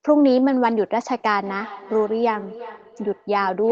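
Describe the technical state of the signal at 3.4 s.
At 3.4 s you're inside a stretch of feedback echo between two devices that runs from 1.43 s to the end of the clip. A second device in the room is replaying the call, and its sound leaks back into the first microphone. Each device's echo canceller only removes its own playback, so it can't catch this. The speech comes round again roughly every 400 ms, peaking at about 18 dB below the direct speech.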